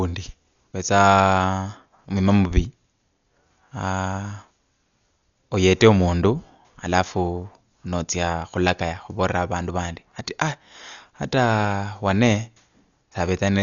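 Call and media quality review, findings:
Speech dull throughout, nothing above 6.9 kHz, rough fluttering noise around tones. Likely Dolby Digital compression at a low bitrate near 48 kbps; the dither-filled lines distinguish it from plain band-limiting.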